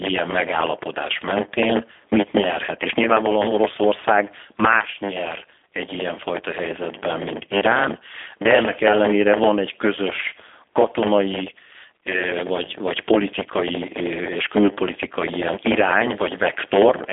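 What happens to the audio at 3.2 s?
At 3.2 s, as across the whole clip, a block size mismatch (padded) is audible. One stage hands over shorter blocks than the next one reads. The remainder of each block is filled with zeros. These regular gaps produce a 100 Hz buzz. The speech also runs slower, at 0.919 times its normal speed.

The same moment also carries G.729 codec damage, which is plainly audible and runs throughout. The codec rebuilds speech from a vocal tract filter, a pitch predictor and a few pulses per 10 ms frame. This fits an 8 kbit/s stream. The line band spans about 250 Hz to 3.5 kHz, so the speech sounds narrow, rough and synthetic.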